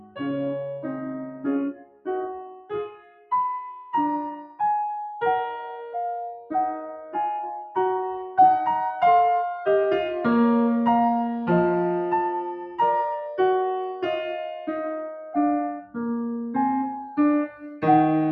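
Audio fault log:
throughout, noise suppressor applied to music or sounds: the music pumps and thins, with held notes and decaying tails sinking while attacks come through, a level swing of about 5 dB. A speech-oriented suppressor was left on and treats sustained musical content as background noise.
0.0–0.2 s, 1.73–2.08 s, 2.45–2.72 s, 2.88–3.31 s, sound cut by the noise suppressor: brief dips where sustained sound drops sharply, by about 14 to 18 dB, deepest near 1.73–2.08 s. The suppressor judged these passages to be noise and pulled them down harder than the surrounding music.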